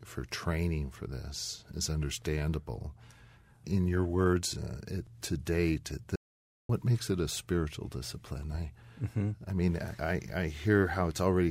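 Audio dropout to silence from 6.16 to 6.69 s: after "it to date at", the speech cuts to dead silence, with no room tone, for 0.54 s, resuming at "makes it a spiritual". The input was likely lost while recording carried on writing silence.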